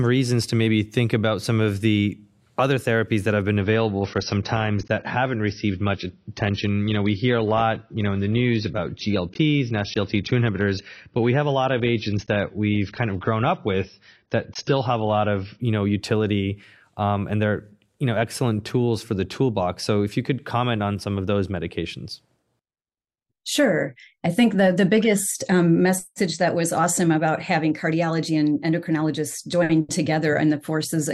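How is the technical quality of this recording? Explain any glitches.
One glitch stands out: a sudden quality drop in the first half. From 3.61 to 15.61 s, the adaptive stream plays at a lower bitrate. The player switched to a leaner encoding, which fits a drop from about 96 to 24 kbit/s. Treble above 6.6 kHz vanishes and codec artefacts thicken, with no gap at the switch. A spectrogram shows a flat ceiling at that frequency.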